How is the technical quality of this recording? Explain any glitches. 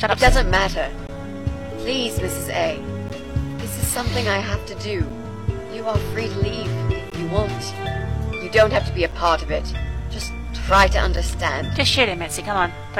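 The recording has one recurring glitch, a gap between stream segments. Brief hard-edged dropouts occur at 1.07, 3.09, 5.10, 7.10, 9.11 and 11.16 s. They come every 2 s, which suggests segment boundaries whose timestamps leave a small hole. The player fills each hole with 7 to 17 ms of silence, so the sound stops abruptly and resumes. Nothing is lost.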